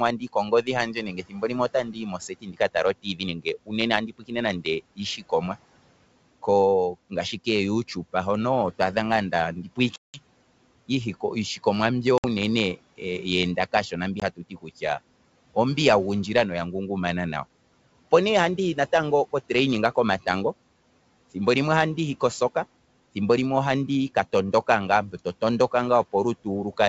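From 0.18 to 3.73 s, the noise suppressor cuts speech. It mistakes soft stretches for noise and pulls them down by up to about 18 dB. Around one and a half seconds in all sound swallowed or faint. The same happens from 4.07 to 5.57 s, over a much shorter total.

Packet loss on the ADPCM call then opens hard-edged silent holes. They fall at 9.96 to 10.22 s, 12.18 to 12.25 s and 14.20 to 14.23 s, removing 180, 60 and 20 ms. Those gaps fit roughly ten, three and one lost packets. The decoder's predictor and step size fall out of step with the sender's. Speech returns slightly distorted, then settles.

From 14.37 to 14.83 s, the suppressor again turns speech down, by up to about 15 dB.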